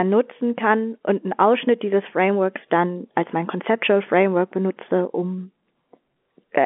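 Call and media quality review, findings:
No faults found: the speech carries the usual telephone-band sound of a 64 kbps A-law G.711 line, limited to roughly 200 Hz to 3.4 kHz, with coding damage faint at most.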